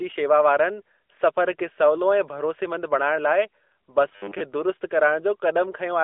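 From 4.08 to 4.40 s the speech collapses into a rigid, metallic buzz at 100 Hz that still loosely tracks the syllables, most likely robotic sound from repeated short buffers: one 10 ms slice is looped to cover missing audio, so most of that stretch is repeats rather than new sound. The band-limited AMR narrowband mobile codec tone, cut off above 3.8 kHz, runs through the whole clip, but this fixed-pitch buzz appears only in that short span.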